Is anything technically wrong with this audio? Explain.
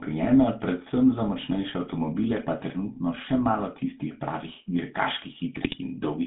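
Yes, there are two faults. Throughout, the GSM full-rate codec gives the speech a buzzy, gravelly roughness. The codec rebuilds the voice from a vocal-tract model driven by sparse pulses, and the spectrogram shows a band from 150 Hz to 3.7 kHz with nothing above it. From 5.55 to 5.78 s, GSM bit errors corrupt the decoder's filter, pitch and gain values. The speech breaks into squawks and gargling, and the waveform shows sudden level spikes and smeared, distorted spectral frames.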